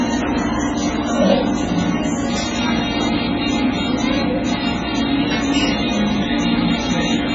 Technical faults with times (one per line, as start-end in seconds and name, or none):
0.00-7.34 MP3 compression